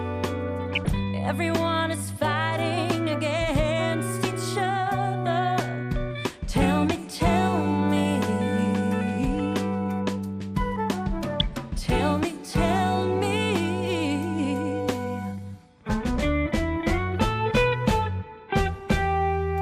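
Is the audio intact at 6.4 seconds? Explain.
No. MP2 compression runs through the whole clip, including 6.4 s. The sound is dull and gurgling, with a granular grit. The likely cause is MPEG Layer II sub-bands starved of bits, switching upper bands off and coarsely quantising the rest, which fits a rate near 80 kbps.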